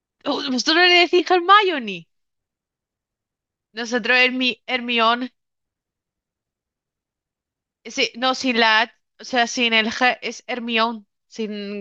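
No technical faults can be heard anywhere in the recording, and the speech signal stays intact and continuous throughout.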